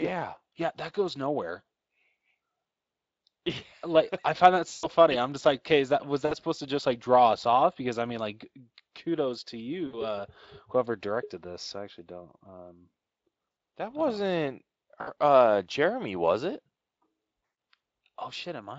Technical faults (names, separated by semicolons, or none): VoIP packet loss concealed by the speech codec